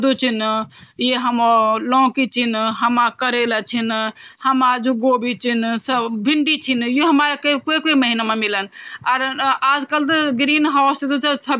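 Nothing stood out on listening to the speech in this recording.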